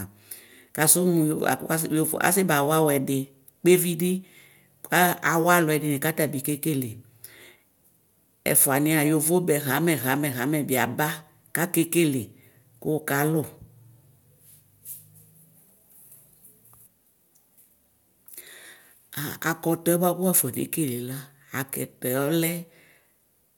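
A short recording of speech, with no technical fault to be heard anywhere in it. There is nothing in the audio that calls for a time or a cause to be given.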